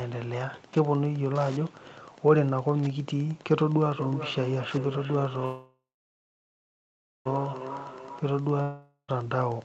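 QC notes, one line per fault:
Throughout: Wi-Fi interference. A steady ticking runs under the speech at about ten clicks per second, spaced 102.4 ms apart, sitting about 25 dB below the speech level. That spacing matches a Wi-Fi beacon interval. A nearby radio's bursts are being picked up and rectified by the audio circuitry, so its transmit rhythm turns into audible clicks.
3.98 to 8.32 s: feedback echo between two devices. Each phrase returns roughly 0.4 s later, peaking about 12 dB under the direct speech, and the repeats get thinner and more ringing on each pass. Two devices on the same call share a room. One plays back what the other's microphone captured, and that microphone hears it again. Neither echo canceller can remove sound from the other device's speaker, so the loop keeps circulating it.
5.45 to 7.27 s: call audio freeze. The last sound is stretched into a buzzy tail that fades, then about 1.4 s of silence follows before the speech resumes exactly where it stopped. 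About 1.8 s has been inserted, nothing is skipped, and everything afterwards runs that much later. The likely cause is packets held up in transit, which left the jitter buffer empty so the receiver filled the wait with concealment and then silence.
8.62 to 9.10 s: long network dropout. The sound smears into a short fading buzz with only a brief moment of silence, and the audio then picks up about 0.46 s further on. Unlike the earlier freeze, that stretch of speech is gone rather than delayed. The likely cause is a run of packets that never arrived, so the receiver concealed the gap and then moved on without the missing audio.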